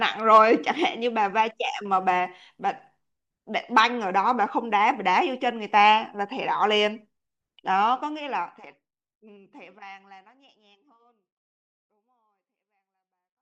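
No faults are audible anywhere in this speech.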